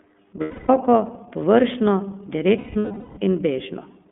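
iLBC codec coding runs throughout the speech, passing only about 200 Hz to 3.5 kHz. Its independent 30 ms frames, consistent with roughly 13.3 kbps, leave a plainly rough, synthetic edge.

Lost iLBC frames come first from 0.41 to 0.70 s, about 270 ms, consistent with nine missing frames. The decoder repeats the last pitch cycle with noise, so the gap sounds like a held buzzy vowel. A second burst runs from 2.58 to 3.19 s, with about 510 ms lost in scattered runs up to around a fifth of a second. Normal speech returns almost immediately after each gap.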